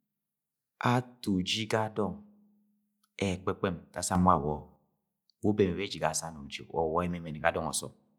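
At 4.15 s there's a sudden gain jump: the speech and the background noise both leap up by about 7 dB in one step, stay raised until 4.76 s, then drop back. That's likely a digital gain setting applied without any ramp.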